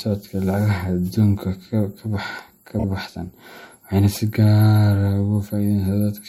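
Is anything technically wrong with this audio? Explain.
Yes, there are repeated frames from 2.78 to 2.84 s in this speech. One short compressed block, about 26.1 ms long, which fits a single codec frame, was written or delivered more than once, so the decoder played it two extra times. That adds 52.2 ms and gives a brief stutter, a rapid triple echo of the same fragment.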